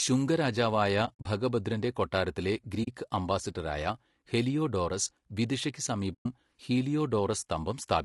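Across the whole speech clip the voice sounds rough and grainy, with a hiss-like fill between the harmonics and a thin, somewhat synthetic top band. That points to low-delay AAC compression, likely AAC-ELD at a low rate, around 32 kbps. Its short frames resolve the pitch harmonics poorly and leave too few bits to code the spectrum cleanly.

At 1.05 to 1.26 s, between "ശുംഗ രാജാവായ" and "ഭഗഭദ്രന്റെ കൊട്ടാരത്തിലെ", the sound drops out in soft-edged holes, about 120 ms of missing audio scattered over 200 ms, the longest gap roughly 70 ms. This is AAC frame loss with muting. The decoder zeroed the lost frames, and the overlapping windows fade each gap in and out. A shorter hole of about 40 ms follows at 2.83 s, just before "അംബാസഡറായ ഹെലിയോഡോറസ് വിദിഷയ്ക്ക്". Another drop, about 120 ms long, comes at 6.13 to 6.26 s, right after those same words.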